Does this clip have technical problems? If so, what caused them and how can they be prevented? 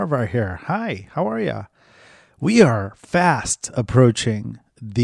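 No, no technical problems here.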